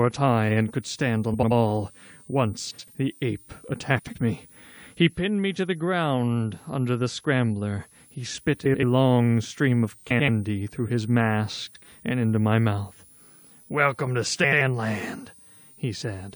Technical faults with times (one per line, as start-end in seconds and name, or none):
0.00-16.35 switching supply whistle
1.34-1.52 frames out of order
2.70-2.88 frames out of order
3.98-4.16 frames out of order
8.65-8.84 frames out of order
10.10-10.29 frames out of order
11.66-11.84 frames out of order
14.43-14.61 frames out of order